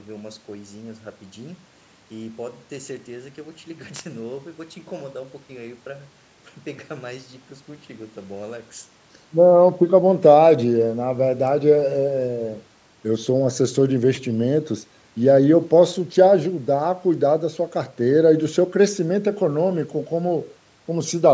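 No technical faults are audible.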